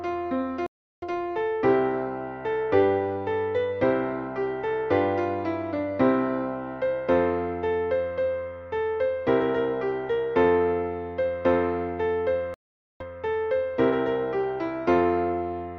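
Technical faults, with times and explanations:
0.66–1.06 s and 12.54–13.03 s, stream reconnect: the connection dropped, playback went silent for 357 ms and then 461 ms, and a fresh decoder picked the live stream up further on. The sound resumes about 0.4 s and about 0.3 s later, so material is skipped and the join doesn't line up. The new decoder mutes or fades in its first frames. On a waveform each gap is a flat line followed by a ramped restart. On a spectrogram it is a clean vertical blank band with a hard edge where it starts and a gradual return after it.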